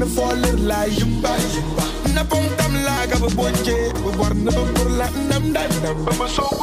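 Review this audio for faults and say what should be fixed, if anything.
Three loud pops sit on top of the sound, at 0.31–0.33 s, 3.32–3.34 s and 4.14–4.16 s. The first two peak roughly 15 dB above it, the third about 10 dB. Each is one sharp pulse. The sound runs on beneath. A brief voltage jolt from a plug, switch or static is the likely cause. Secure connectors and avoid switching or handling gear while recording.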